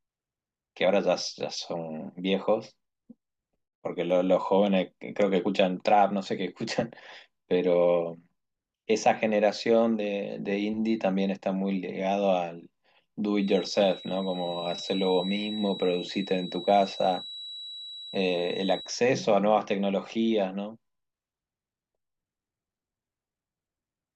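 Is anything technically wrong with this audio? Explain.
Yes. From 13.37 to 18.96 s, a feedback whistle sits behind the speech. It is a thin, steady tone near 3.9 kHz, about 15 dB below the speech, swelling and fading slowly in level. The likely cause is a loudspeaker-to-microphone loop held just short of runaway feedback.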